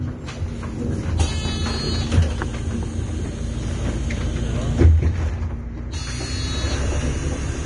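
Vorbis compression runs throughout these sounds: nothing sits above about 10.6 kHz, and the treble is hissy and grainy, likely from heavy quantisation at a bitrate around 31 kbps.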